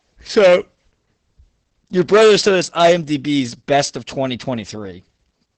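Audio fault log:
Throughout: Opus voice compression. Nothing reaches above 8.6 kHz, and the speech sounds muffled, hoarse and slightly robotic because the linear-prediction coder renders the excitation coarsely, consistent with roughly 10 kbps. That synthetic buzz, not just lost treble, separates it from plain low-pass filtering.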